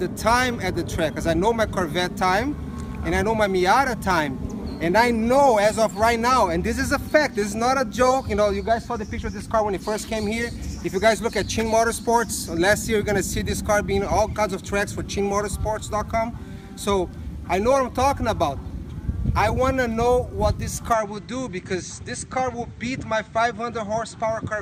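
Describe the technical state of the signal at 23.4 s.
At 23.4 s the sound is duller and boxy. Nothing reaches above 8.6 kHz, the level sits around 5 dB lower, and a new background noise appears, roughly 40 dB below the signal. This state runs from 20.93 s to the end at 24.62 s, with no gap at the changeover. The likely cause is an input switched to a poorer device partway through recording, one with a narrower band, its own tone, and a different noise floor.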